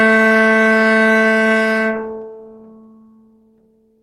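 Nothing technically wrong turns up in this short recording of sounds, so there's nothing to flag here.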